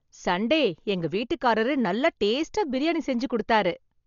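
Throughout the speech, the sound is dull and heavily degraded, with a rough, fluttering noise around tonal parts. The likely cause is Dolby Digital compression at a very low bitrate, perhaps near 40 kbps. A spectrogram shows nothing above 6.9 kHz and speckled, noise-filled bands below.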